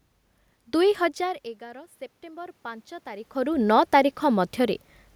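A speech recording carrying a DC offset for its entire length. The waveform sits shifted off zero by a constant amount, so it is not heard as a tone at all. That sets it apart from mains hum, which has a pitch. Here there is only steady energy at the very bottom of the spectrum, and the shift wastes some headroom. From 0.97 to 3.63 s there is automatic gain rising. The input level falls by about 17 dB as the talker moves back around 1 s, and the gain control responds by slowly adding about 7 dB. It is the slow, gradual swell over more than two seconds that marks this as gain control. The room noise also comes up along with the voice. When the talker moves again, around 3 s, the voice changes level.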